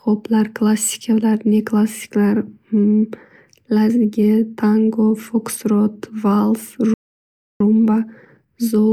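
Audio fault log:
6.94–7.61 s, playback stall: the speech stops mid-flow and the output goes completely silent for about 0.66 s before picking up again. The player most likely ran out of buffered data or had its audio thread blocked, so nothing reached the output until it recovered.
7.61–8.92 s, time-compressed catch-up: from the restart to the end, the speech sounds hurried, running at 1.1 times normal speed while keeping its normal pitch. The player is working off the backlog from the stall by cutting out short slices and cross-fading over each join.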